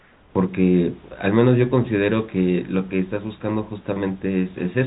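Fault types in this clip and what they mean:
Comfort noise in place of the background: the first 0.35 s carries a steady, featureless hiss about 3 dB quieter than the real room sound. This is likely from silence suppression filling the pause with synthetic noise.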